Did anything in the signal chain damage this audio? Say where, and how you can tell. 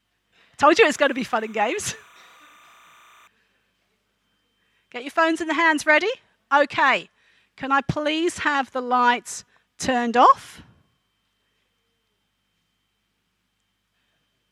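Yes. Timecode bleed from the analogue wiring stage runs from 0.74 s to 3.27 s as a steady chirping warble, roughly 30 dB below the sound. Linear timecode on an adjacent cable or track has coupled in. It switches between tones near 1 kHz and 2 kHz, and its repeating pattern fits 30 frames per second. A spectrogram shows two faint horizontal bands there. The waveform is barely changed at that level.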